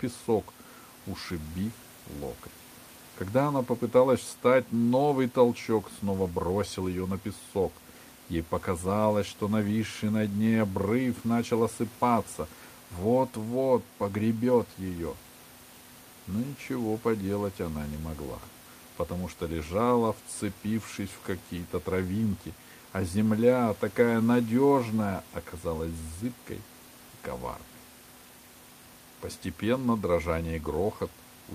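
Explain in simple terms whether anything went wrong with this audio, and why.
Nothing went wrong with this audio; the faint background sound is just the room the microphone was in, not a problem with the system.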